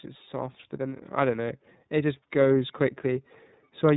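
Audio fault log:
throughout, iLBC codec: The speech passed through the narrowband iLBC codec, which codes each frame's excitation on its own, without borrowing from the frame before. The roughness fits its 30 ms frame, 13.33 kbps mode. Nothing above 4 kHz survives, so sibilants and consonant detail are dulled. The damage is plainly audible as a slightly grainy, synthetic edge on the voice. The call's microphone processing, which trims only the deepest bass, doesn't account for this.
0.32 to 3.95 s, automatic gain rising: The automatic gain control judged the input too quiet and kept turning its gain up for almost the rest of the clip, by about 5 dB in total. Because the gain stage can't separate voice from surroundings, speech and background rise together. The result is a slow swell in loudness over several seconds rather than a sudden jump.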